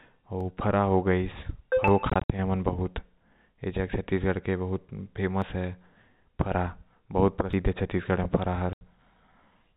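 At 0.41, 1.88, 5.42 and 7.53 s the speech jumps forward, likely a dropped buffer (overrun): roughly 20, 40, 20 and 70 ms vanish and the edges butt together, seen as a waveform discontinuity and a thin vertical streak on the spectrogram, with no gap. Packet loss filled with silence chops 2.10 to 2.30 s, removing 120 ms in holes up to 60 ms long, and blanks 80 ms at 8.73 to 8.81 s. The hole lengths fit 20 ms packets. These show as flat silent stretches in the waveform and empty spectrogram columns with hard edges. Throughout, G.711 telephone coding keeps the audio below 4 kHz.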